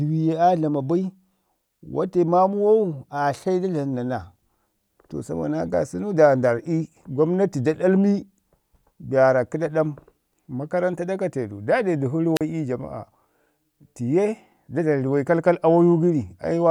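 A speech clip, with a short gap from 12.35 to 12.41 s: a brief flick of hiss, then about 40 ms of near silence before the voice returns. This is a wireless microphone squelch dropout, where the radio signal faded enough that the receiver's squelch muted its output.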